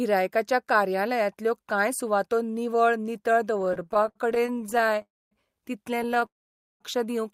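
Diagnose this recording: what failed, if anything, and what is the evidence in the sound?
The network path failed first, as repeated stalls (stutter) in the jitter buffer. Right after "कांय सुवातो निवळ नितळ", from 3.57 to 5.02 s, the speech catches and drags through 39 short gaps. The longest lasts 65 ms. About 443 ms is filled in, roughly 31% of that span. A second, shorter run follows from 5.97 to 6.24 s, with 8 gaps of 17 ms at most. Packets arrived slower than playback. The receiver stretched the last sound each time, so nothing is lost.

A call audio freeze follows each stutter run. The first runs from 5.02 to 5.33 s and adds about 0.29 s, most of it, about 240 ms, near silence. The second runs from 6.26 to 6.82 s and adds about 0.55 s, about 510 ms of it silent. The last sound fades out, then speech resumes exactly where it stopped. No audio is missing. The likely cause is packets held up in the network, which emptied the jitter buffer and shifted playback delay by the gap length.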